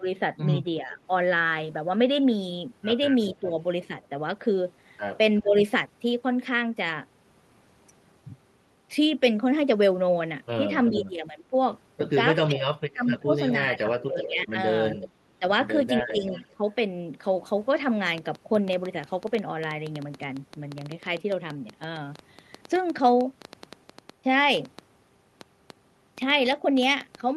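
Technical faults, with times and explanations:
0.0–1.1 s, 3.4–5.57 s and 10.9–16.63 s, speech suppressed in double talk: the voice dips and cuts out in pieces while the far side is also talking, adding up to about 0.2 s, 0.3 s and 2 s in the three stretches. The deepest drops are about 10, 15 and 25 dB. The likely cause is an echo canceller that cannot tell this talker apart from loudspeaker echo and so turns everything down at once.
3.21–4.08 s, 10.88–11.02 s and 13.06–16.47 s, echo leak: a faint delayed copy of the voice trails the original by about 372 to 379 ms. It sits about 20 dB below the speech in the first stretch and about 15 dB below in the later two. The long stretch from 13.06 s overlaps the heaviest suppression. This is likely a far-end loudspeaker whose echo canceller left part of its microphone pickup in the return signal.
18.07–27.36 s, train of clicks: similar-shaped ticks arrive at about 7.1 per second with uneven spacing and peak around 5 dB above the signal. 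They carry on through pauses as well as over the sound, all the way to the end. Interference from nearby equipment or a faulty connection or power supply is the likely source of the repeated pulses.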